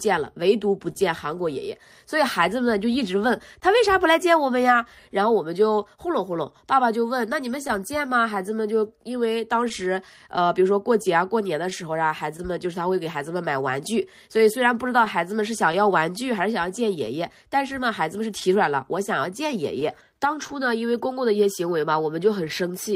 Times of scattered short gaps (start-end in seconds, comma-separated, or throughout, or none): 6.34-22.52